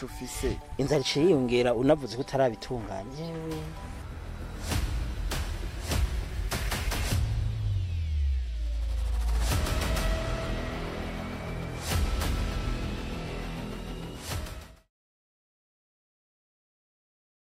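No technical faults are audible.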